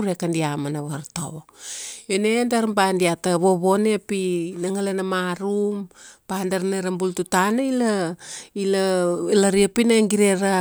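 Nothing in the recording stood out as a technical problem on listening.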